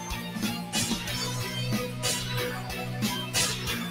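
Throughout, a noise suppressor applied to music or sounds mistakes sustained tones and tails for noise, pulling them down by about 5 dB while attacks pass, unlike steady compressor pumping.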